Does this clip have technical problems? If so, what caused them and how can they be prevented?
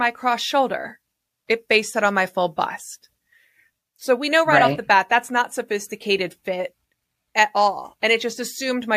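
No, nothing in this recording stood out as a technical problem on listening, so there is nothing here that needs preventing.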